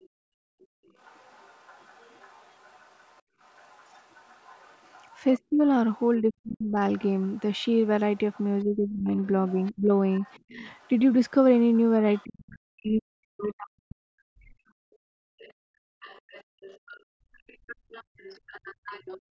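The echo canceller most likely left part of the loudspeaker signal in the microphone path, so the other side's voice leaks through across the whole clip, from 0.01 s to the end near 19.3 s. It sits well under the talker, roughly 25 dB down, as a faint second voice running behind the speech.

From 0.09 s to 3.38 s, the canceller reacted to loudspeaker playback by clamping the microphone hard. This is background gated by the echo canceller: the room sound drops by as much as about 33 dB, totalling around a second, then springs back when the suppression releases, so the ambience seems to switch off and on.

Between 5.39 s and 14.58 s both sides were likely talking at once, and the canceller probably could not tell the near talker from the echo. This is speech suppressed in double talk. It turned everything down, so the talker's own speech sinks by up to roughly 40 dB over about four seconds in total.

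From 14.86 s to 19.3 s the background gating returns, with dips of about 34 dB adding up to roughly two seconds, so the room tone again drops out and snaps back in step with the loudspeaker activity.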